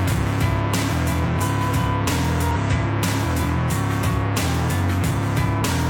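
Damaged data in the compressed stream occurs twice, from 2.51 to 2.57 s and from 5.58 to 5.62 s. At each point, corrupted bytes left the decoder unable to parse the frames, so it lost sync and hunted for the next valid frame header. The misdecoded stretch comes out as a short chirp, squawk, click or hole, roughly 60 ms long the first time and about 45 ms the second, that cuts abruptly into the sound.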